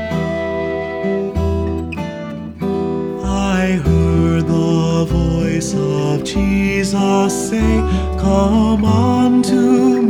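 No technical faults can be heard anywhere in this audio.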